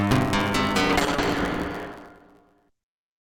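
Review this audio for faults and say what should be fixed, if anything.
The whole clip carries a steady buzz at about 109 Hz, and everything plays back about 1.16 times too fast while the pitch stays roughly where it should. That's a truncated block size mismatch: one stage writes longer blocks than the next one reads, and the tail of each block gets dropped. The buzz is those cuts repeating. The timing fits a 512-sample write block. To prevent it, make sure both stages agree on block size, or buffer the leftover samples instead of discarding them.

From 0.91 s to the end there's a call bitrate drop. The bandwidth estimate collapsed, and the encoder went from 128 kbps to 8 kbps, holding at that bottom rate for about 1.4 s. At that rate the coding gets coarse and the top end goes. The bandwidth narrows from 20 kHz to 8 kHz, so the sound turns rough and muffled and never recovers before the clip stops. 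To prevent it, smooth out the bandwidth estimator and set a sensible minimum bitrate so one bad estimate can't starve the encoder.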